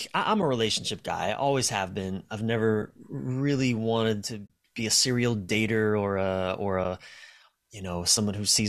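AAC frame loss with muting occurs at 0.42 s, at 2.82 s just after "always have been i've", from 4.47 to 4.50 s between "wanted to" and "be a serial dater", and at 6.84 s after "dater or a or". Each time the decoder had nothing to play for a stretch and set the spectrum to zero. The overlapping windows fade the speech down and back up, leaving a brief dip where one frame was lost and a soft-edged hole where several ran together. Three of the holes last about 10 ms. The one at 4.47 s lasts about 30 ms, which fits three consecutive lost frames. Frames this short point to low-delay AAC compression, likely AAC-ELD.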